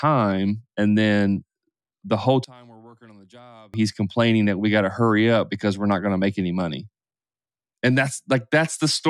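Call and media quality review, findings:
One channel inverted, 2.44–3.74 s, between "the whole" and "he's complaining that we". Speech drops about 28 dB to a faint residue. Likely a polarity flip on one stereo leg before the mono downmix cancels the centred speech. Residue, not silence, rules out a dropout.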